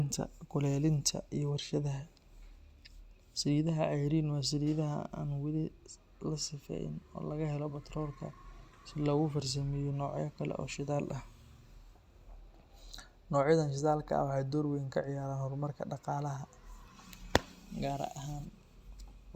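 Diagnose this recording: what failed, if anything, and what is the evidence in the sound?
Nothing failed; no faults found.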